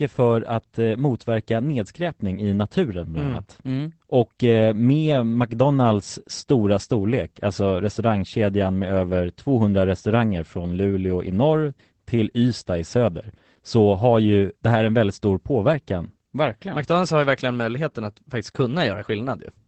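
A speech recording with Opus voice compression throughout. The voice sounds muffled and slightly hoarse, with a faint robotic edge. The top of the spectrum stops near 8 kHz, which points to the wideband setting. The narrowing comes from the linear-prediction coder used for voice, SILK, trimming the band and coding the excitation coarsely. The damage is plainly audible and fits a low rate of about 12 kbps.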